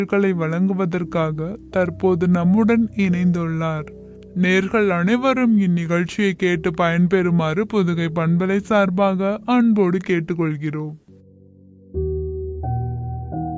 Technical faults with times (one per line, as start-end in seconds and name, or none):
0.00-13.57 wrong sample rate